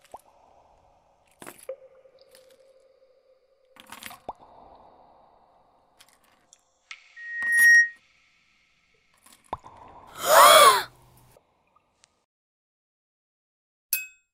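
At 7.16 s a loudspeaker feedback squeal starts: the microphone re-amplifies its own speaker output, and the loop runs away at 1.9 kHz. A pure tone swells over roughly half a second to about 10 dB above the sound, then stops at 7.99 s. A spectrogram shows one bright horizontal line, and the waveform bulges.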